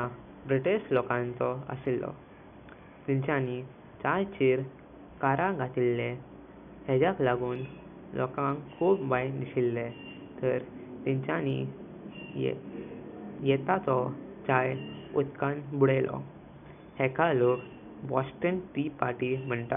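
The speech signal carries no technical faults, with only a low bed of room noise sitting about 39 dB beneath the speech.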